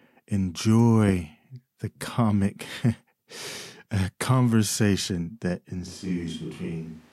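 At 5.88 s the speech suddenly turns roomy and hollow, with less bass. This is a switch to a distant microphone, likely because the close microphone's signal dropped out. The level falls about 5 dB. Background noise sits roughly 30 dB below the speech. It lasts to the end.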